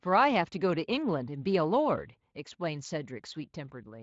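No technical faults are audible.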